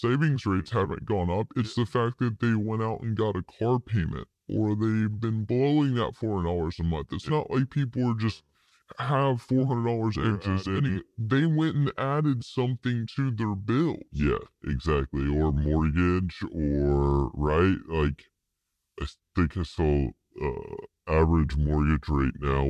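Speech runs throughout at about 0.73 times its natural speed, with pitch lowered by about 5.6 semitones, a classic wrong sample rate. The ratio fits audio recorded at 44.1 kHz being played at 32 kHz without conversion, so every sample lasts longer. Tempo and pitch drop together by the same factor, which separates it from a pitch shift or time-stretch, where one changes while the other is held.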